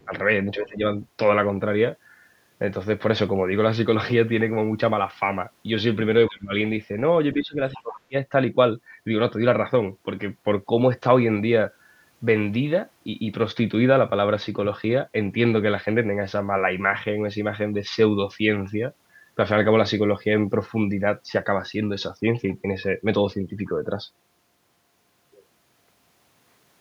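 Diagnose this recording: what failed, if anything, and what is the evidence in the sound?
Call processing failed. The speech dips by about 15 to 25 dB at 0.00–0.13, 0.55–0.83, 6.28–6.52 and 7.39–8.15 s. This is likely speech suppressed in double talk: the echo canceller mistook overlapping talk for echo.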